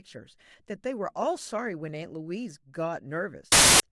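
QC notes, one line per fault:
3.52–3.80 s, file tags played as audio: a sudden wall of very loud white noise with hard edges at both ends. That's an embedded cover picture being read as samples. Compressed image data is basically random bytes, so it comes out as flat-out static.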